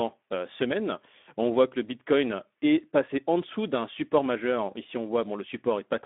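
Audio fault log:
Throughout: Speex codec at about 11 kbps on a 250 Hz to 3.6 kHz line, so speech sounds hoarse and noisy from the thin excitation, with nothing above 3.8 kHz.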